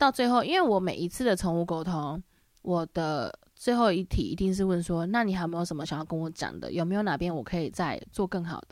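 No technical faults are audible anywhere in this speech.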